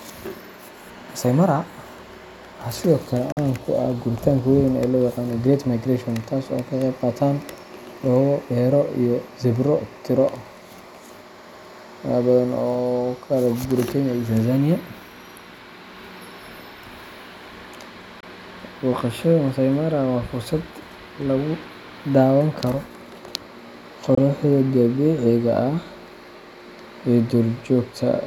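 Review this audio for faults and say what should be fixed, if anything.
A likely Bluetooth dropout: audio packets reached the headphones too late and were discarded, so the output fell silent until good packets arrived. The speech has three holes, at 3.32 to 3.38 s (about 46 ms, which fits two lost packets), at 18.20 to 18.25 s and at 24.15 to 24.19 s (about 23 ms each, one packet). Each time the speech resumes further on, as though it had kept playing through the gap. Keeping the wireless link short and unobstructed, or using a wired connection, would prevent it.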